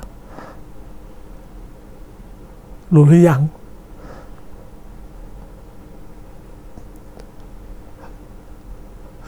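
No technical fault can be heard anywhere in this speech recording.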